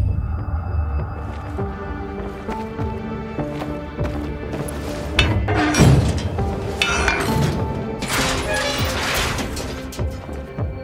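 At 4.68 s an electrical switching spike adds a sharp snap on top of the sound, likely from nearby switch arcing. Unlike a dropout, nothing underneath goes missing.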